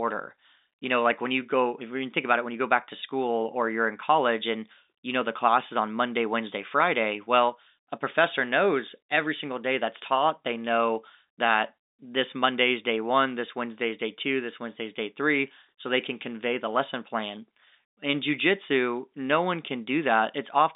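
No faults can be heard in the speech, which carries the narrow band of G.711 telephone coding, running from about 250 Hz to 3.7 kHz with nothing above 3.8 kHz, as expected of a 64 kbps mu-law line.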